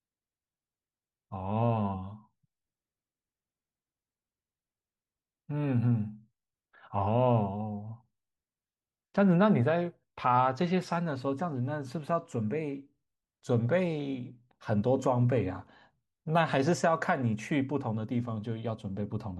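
No technical faults are audible anywhere in the recording.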